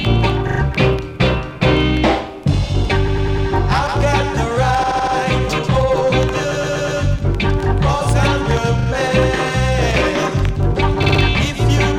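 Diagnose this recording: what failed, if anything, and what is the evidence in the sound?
Repeated frames in the codec stream. Stutters at 0.47, 3.07, 4.83, 6.51, 8.79 and 11.03 s. Blocks of 40 to 120 ms replay, lengthening the audio.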